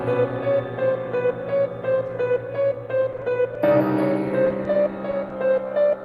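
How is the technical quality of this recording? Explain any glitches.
The recording has packet-loss glitches in its second half: two stretches of repeated dropouts and one isolated dropout.

From 3.12 to 3.56 s and again from 4.45 to 4.75 s there is repeated packet loss (robotic sound). Each stretch contains four gaps of up to 10 ms, with 40 ms of audio filled in by continuing the preceding sound. The repeated patching breaks the audio into a choppy, robotic texture with pieces missing. On a spectrogram, the patched slices appear as brief smeared bands. In the waveform, short repeated segments replace the original detail.

At 5.29 to 5.31 s there is short concealed packet loss. About 10 ms never arrived in time, so the receiver extended the last sound across the hole and blended it back into the real audio. This is heard as a brief smear or wobble. On a spectrogram, it shows as a thin smeared slice. 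In the waveform, a small segment continues the preceding shape before the audio resumes.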